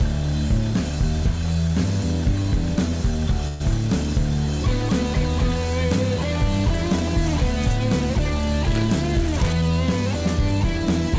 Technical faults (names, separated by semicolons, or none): call audio freeze